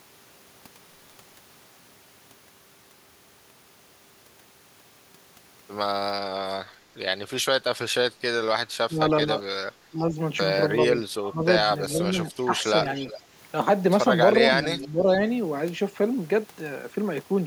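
From 8.88 s the speech starts getting pushed down in bursts: 8.88–9.31 s dips by about 10 dB, 9.91–10.16 s by only about 5 dB, 10.92–11.45 s by about 15 dB (the deepest, lasting around half a second), and 11.93–12.51 s by about 10 dB. Each one sounds like the talker briefly fading or going hollow mid-phrase. That's likely speech suppressed in double talk, where an echo canceller, hearing both ends at once, ducks everything rather than risk letting echo through.

Then at 12.95–13.2 s there's a faint ghost of the voice trailing about 404 ms behind, roughly 15 dB under the speech. That's likely echo leak, with a far-end loudspeaker's output getting past its canceller and coming back to us. At 14.62–15.07 s another suppression dip of about 10 dB overlaps a second, quieter leak at 14.81–15.18 s, around 20 dB down with the same 404 ms delay, so the voice sags while a delayed copy sneaks in underneath.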